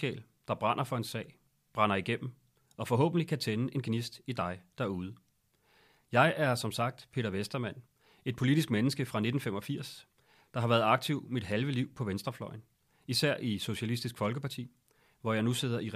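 No technical faults are audible.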